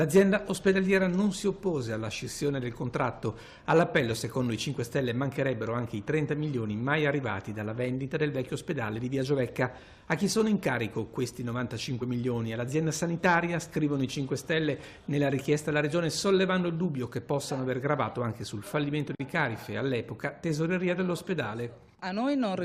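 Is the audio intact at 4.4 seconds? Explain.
Yes, at 4.4 seconds the audio is intact, with no dropout, click, distortion or other fault at that moment.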